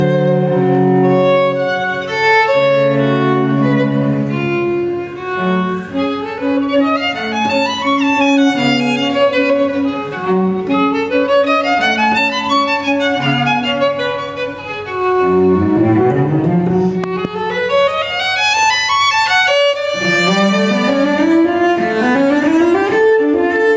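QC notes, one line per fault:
Throughout: gain pumping. The level swings by around 10 dB, pulled down on each loud sound, so loud and soft parts sit squashed together. This is likely input gain set far too high, with a fast limiter clamping down on every peak.
17.04 to 17.27 s: loud pop. Two sharp pops in quick succession jump out roughly 10 dB above the surrounding sound, which carries on underneath. A likely cause is a sudden voltage step from a plug, switch, static discharge or driver glitch.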